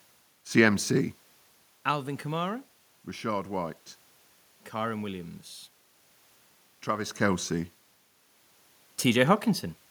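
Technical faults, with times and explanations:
Listening to the speech, nothing stood out as a technical fault.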